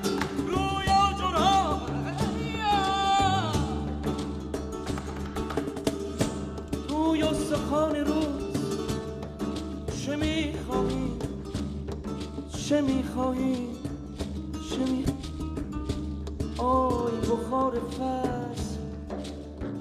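Stream segment skipped, at 15.05 to 15.09 s: the audio jumps abruptly ahead with a blip at the join. The likely cause is one segment of the segmented stream failing to load, so the player carried on with the next, leaving a second or more of the programme missing.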